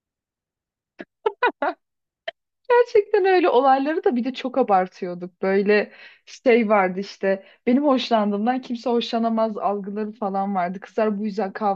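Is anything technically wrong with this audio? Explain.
No, nothing is technically wrong.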